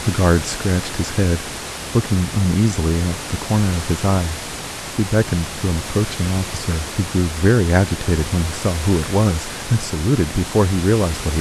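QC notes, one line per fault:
No faults detected on review; the speech presents without audible defects.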